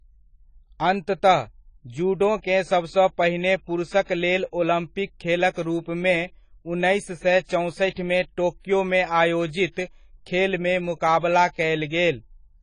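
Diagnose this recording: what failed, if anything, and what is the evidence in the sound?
The failure sits at the codec stage. Throughout the speech, nothing survives above 10 kHz. The sound is dull and smeared. Sibilants carry a warbling, fizzy edge. This is AAC compression, likely AAC-LC at a low bitrate near 24 kbps, starving the spectrum of bits.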